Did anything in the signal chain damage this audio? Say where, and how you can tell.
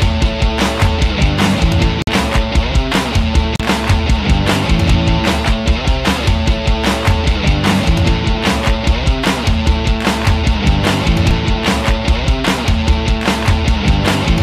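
Yes. Bluetooth stall at 2.02–2.09 s and 3.56–3.61 s: the audio drops to silence for 51 ms and then 37 ms before resuming. This points to the wireless playback link, likely interference holding up packets until the headphones' buffer ran empty and waited for retransmissions.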